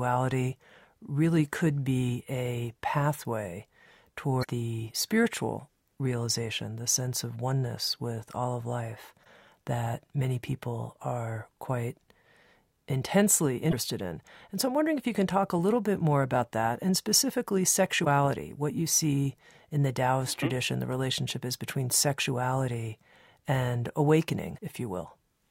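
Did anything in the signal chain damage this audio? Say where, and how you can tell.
Yes. The damage happened at the codec or storage stage: there is damaged data in the compressed stream. Brief disruptions of about 40 to 55 ms break into the speech at 4.40 s (just before "the spiritual realization the"), 9.21 s (after "with all of life"), 13.68 s, 18.01 s (after "about that and specifically") and 24.54 s. Corrupt bytes make the decoder misread those frames and resynchronise. A network dropout would instead leave a gap or a smeared repeat.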